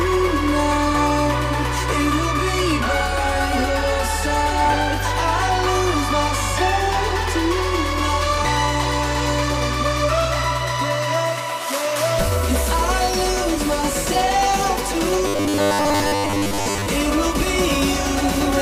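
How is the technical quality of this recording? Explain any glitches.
One glitch stands out: robotic sound from repeated short buffers, from 15.27 to 16.88 s. For most of that stretch, a rigid metallic buzz at 100 Hz replaces the sound. This is likely a 10 ms block looped whenever fresh audio arrives late, with the real audio skipped.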